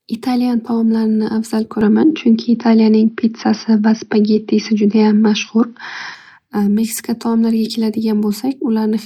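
From 1.81 to 6.15 s the speech turns dull, with nothing above 6 kHz, a small level shift and faint new noise. The likely cause is an input switched to a poorer device.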